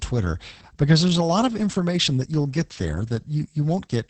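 Throughout, Opus voice compression at heavy damage leaves the speech hoarse and slightly robotic with nothing above 8.5 kHz, unlike plain filtering. This points to roughly 10 kbps SILK.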